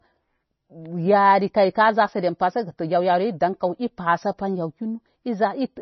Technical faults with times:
0.00-5.81 MP3 compression

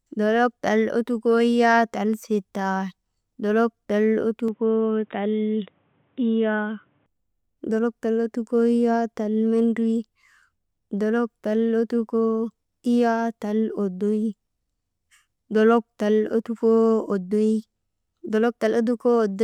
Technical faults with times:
4.48-7.06 input switched to a poorer device

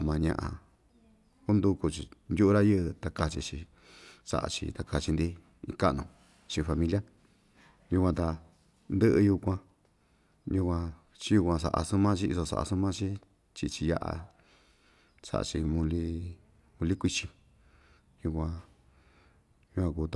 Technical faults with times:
none

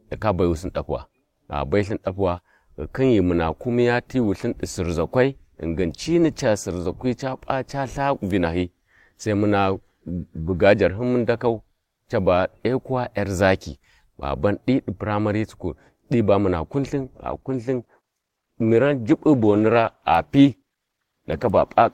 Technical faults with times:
17.31-21.93 adaptive stream at a lower bitrate

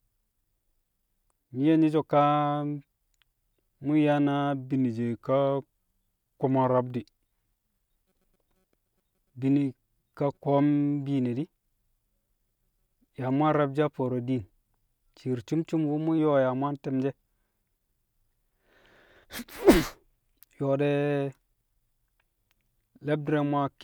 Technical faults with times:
4.73-7.04 drift correction step
15.53-16.18 drift correction step

